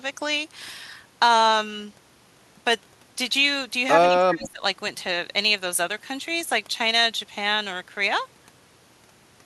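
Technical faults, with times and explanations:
4.08–4.63 s, speech suppressed in double talk: For about half a second the speech sinks sharply, at its deepest roughly 25 dB below its normal level, so it sounds pushed far back or partly gated away rather than simply quieter. This is likely an echo canceller under double talk: with both ends sounding at once, it could not tell the local talker from loudspeaker echo and attenuated everything on the send path, taking the wanted speech down with it.
4.43–4.50 s, echo leak: A faint delayed copy of the speech slips through, trailing the original by 94 ms and sitting around 20 dB below it, heard as a short ghost inside the suppressed stretch. The likely cause is a loudspeaker at one end whose echo canceller failed to fully remove what the microphone picked up, so a residue of the returning signal was sent back.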